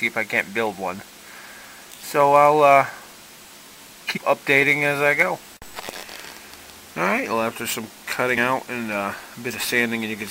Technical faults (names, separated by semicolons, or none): damaged data in a compressed stream